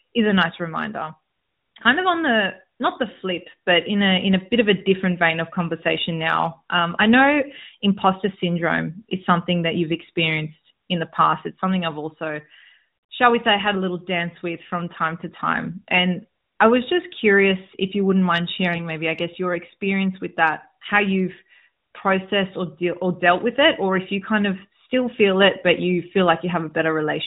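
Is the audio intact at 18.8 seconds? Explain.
No. At 18.74 to 18.83 s, between "if you wouldn't mind" and "maybe I guess your", there are AMR bit errors. The span lasts about 86 ms, which fits a few damaged 20 ms frames. Several percent of the weakly protected bits arrived flipped, while the core bits still passed their check. Pulse positions and the fine pitch, gain and spectral values decode wrongly. Pitch and level roughly hold, but the sound turns briefly hoarse, scratchy and gargly over the narrowband AMR-NB signal.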